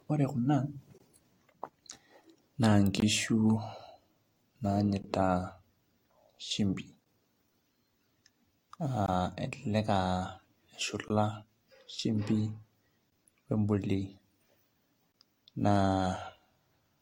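All through the speech there's stacked codec smear and nothing above 16.7 kHz, likely transcoding between lossy codecs, something like AAC followed by Vorbis, layering both sets of artefacts. Then there's a gap between chunks every 2 seconds, at 0.98, 3.00, 5.02, 7.04, 9.06, 11.08, 13.10 and 15.12 s. Each is a 20 ms hole where chunks join.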